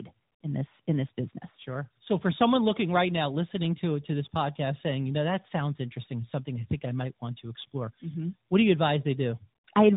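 Throughout the clip, the call suffers tandem speech coding: it was decoded and re-encoded at each link boundary, passing through a chain that fits CVSD at 64 kbit/s, then G.711 mu-law, then AMR-NB at 12.2 kbit/s. Each coder had to model speech already roughened by the one before, so the errors stack. The speech sounds rough and warbly, and muffled, with nothing present above 3.8 kHz.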